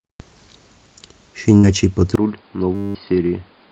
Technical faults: burst of packet loss; input switched to a poorer device; system hang loop

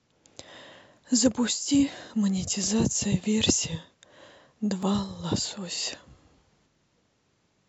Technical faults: clock drift buffer slips

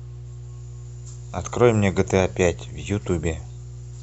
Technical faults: mains hum

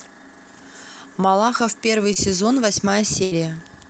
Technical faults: short concealed packet loss; burst of packet loss

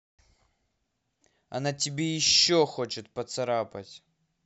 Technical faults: none

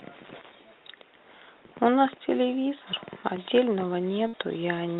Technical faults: burst of packet loss

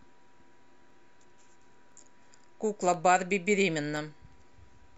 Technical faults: periodic USB or driver dropouts

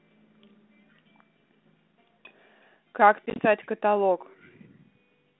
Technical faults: packet loss on an ADPCM call

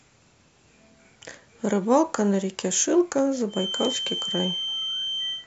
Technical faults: feedback whistle

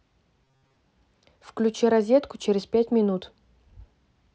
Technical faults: robotic sound from repeated short buffers

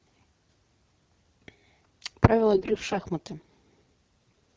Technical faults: AMR bit errors

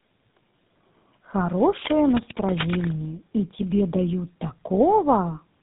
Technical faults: tandem speech coding

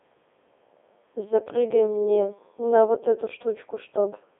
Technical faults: Codec 2 vocoder

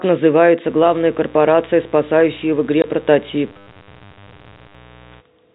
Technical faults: mains buzz; packet loss filled with silence; robotic sound from repeated short buffers

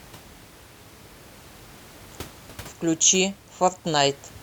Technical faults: none

